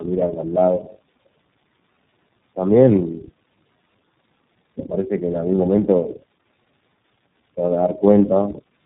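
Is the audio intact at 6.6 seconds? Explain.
No: tandem speech coding runs throughout, with three low-rate speech codecs re-encoding each other's output, leaving rough, muffled, warbly speech with nothing above 3.8 kHz.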